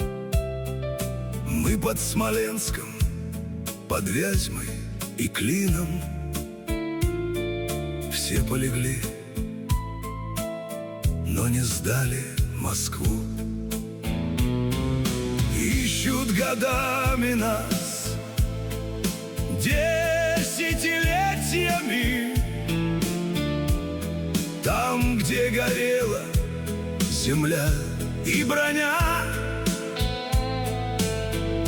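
Nothing here calls for comment, since no technical fault turns up anywhere in the audio.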